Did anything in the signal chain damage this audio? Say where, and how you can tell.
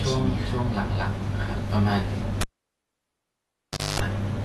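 Yes, two stages left their mark. The whole clip sounds dull and smeared, with nothing above about 12.1 kHz and a watery, warbling texture on sustained sounds and sibilants. That's likely codec damage from AAC compression, and the amount of it fits a low bitrate around 32 kbps. At that rate the encoder spends its bits on the bands the hearing model ranks highest. It drops the top octave and quantises the rest coarsely, so detail smears from frame to frame.

The second one is in the analogue wiring: a cable pulled and plugged in. At 2.41 s there's a pop and the signal falls to near silence for roughly 1.5 s. A quarter-second burst of 50 Hz mains buzz comes in while only the tip is touching and the shield isn't grounded yet. The sound comes back with another pop at 4.0 s, once the connector is fully seated.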